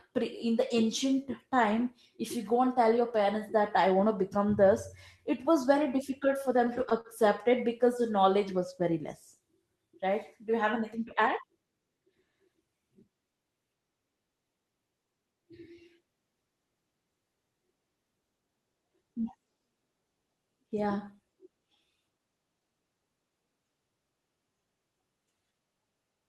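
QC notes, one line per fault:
6.46–7.07 s, repeated stalls (stutter): between "it was very difficult" and "it because", playback halts six times as late packets drain the jitter buffer; each gap is filled by stretching the preceding sound, 89 ms total, longest 39 ms. Nothing is lost; the phrase drags.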